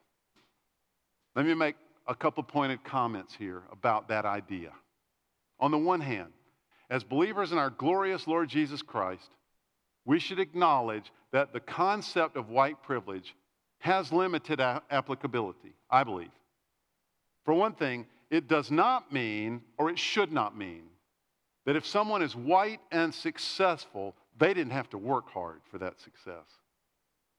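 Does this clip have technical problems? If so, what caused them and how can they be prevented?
No, nothing stood out as a technical problem on listening to this speech recording, so there is nothing here that calls for a cause or a prevention step.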